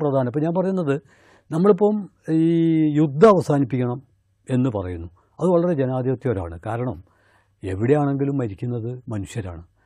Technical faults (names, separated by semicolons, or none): none